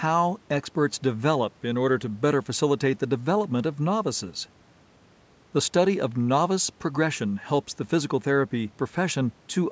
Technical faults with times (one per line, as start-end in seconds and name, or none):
none